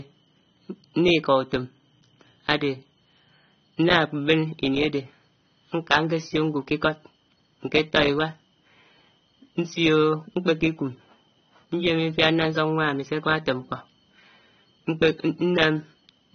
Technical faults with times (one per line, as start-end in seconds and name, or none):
0.00-16.35 AAC compression